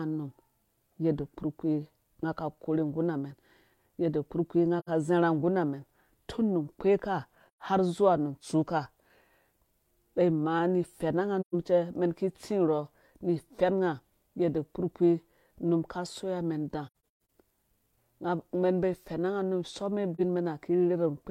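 Speech with soft holes at 4.79–4.89 s (just before "ka zarha nggurha"), 7.48–7.62 s, 11.40–11.54 s, 16.87–17.28 s (scattered, longest about 150 ms) and 20.15–20.21 s: AAC frame loss with muting, where missing frames are zeroed and the overlapping windows fade out and back in.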